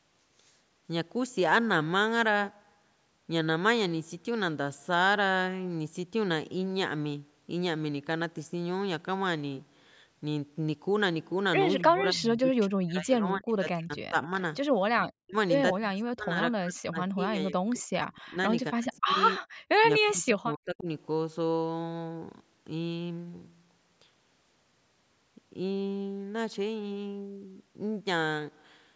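Between 11.85 and 19.14 s the speech is pulled down in chunks: 11.85–14.31 s, around 15.23–15.36 s, 15.77–16.41 s, 16.58–18.37 s and 18.71–19.14 s. It drops by around 40 dB, so it fades or vanishes in pieces. This is speech suppressed in double talk, likely because the echo canceller mistook the talker for loudspeaker echo while both sides spoke. A waveform shows the envelope collapsing to near-flat stretches, and a spectrogram shows blank vertical gaps cut through the harmonics.

At 19.43–19.57 s the background is gated by the echo canceller. The room tone is clamped down by about 40 dB for roughly 150 ms while the far end plays, then returns. It appears as a brief dark notch across the whole spectrogram and a sudden dip in the noise floor.

A last, shallower suppression in double talk runs from 20.06 to 20.88 s. It drops about 25 dB, so the speech dips. The waveform shows a narrowed envelope, and the spectrogram shows faded rather than missing energy.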